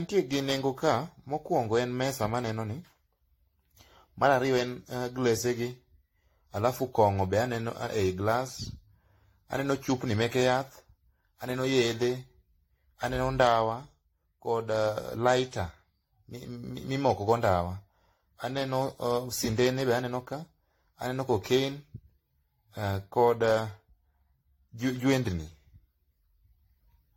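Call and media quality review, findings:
Generation loss, throughout: swirly, hollow speech, smeared consonant attacks. Likely repeated AAC-LC re-encoding, around five passes, each requantising on a shifted frame grid. Fits a 64 kbit/s chain. Spectrogram: empty above 16.6 kHz, blurred onsets.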